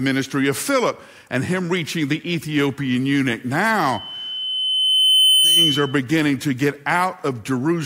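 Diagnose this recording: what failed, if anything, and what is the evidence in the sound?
A loudspeaker feedback squeal entered in the analogue acoustic loop, where the microphone hears the loudspeaker it drives. From 3.92 s a pure 3 kHz tone emerges under the speech, swelling over roughly a second and a half until it sits a few decibels above the speech, and it persists to 5.99 s. On a spectrogram it shows as a single bright horizontal line at 3 kHz that thickens as it grows. The waveform envelope rises steadily through that first second and a half. Loop gain above unity at that frequency sustains the tone.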